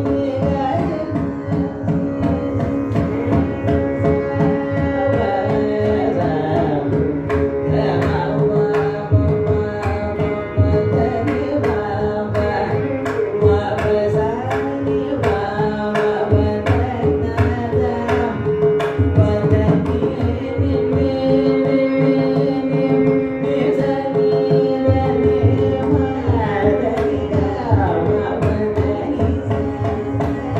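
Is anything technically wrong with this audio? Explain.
No, nothing technically wrong turns up anywhere in this recording.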